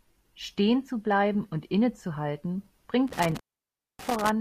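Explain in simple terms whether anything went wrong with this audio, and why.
A loose cable or plug briefly lost its connection, a fault called intermittent contact. Between about 3.08 and 4.29 seconds the speech cuts out for roughly 0.6 seconds, with crackles where it drops and returns and faint hiss left during the gap.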